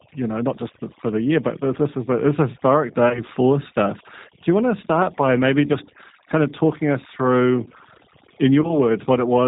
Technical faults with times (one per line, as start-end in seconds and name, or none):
0.00-9.47 overdone noise removal
0.00-9.47 G.729 codec
3.09-3.21 VoIP packet loss concealed by the speech codec
5.67-5.71 VoIP packet loss concealed by the speech codec
8.61-8.74 VoIP packet loss concealed by the speech codec